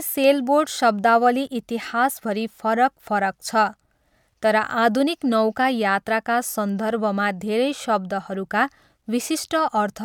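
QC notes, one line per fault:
5.27 to 5.32 s, corrupt frame decoded: flipped bits in what sounds like a couple of consecutive compressed frames went unnoticed, and the decoder reconstructed them anyway. With gain values and spectral codes misread, energy lands at the wrong frequencies, for roughly the length of the damaged frames. The result is a brief glitch of about 50 ms, fairly quiet, somewhere near -35 dBFS, that sits over the speech rather than belonging to it.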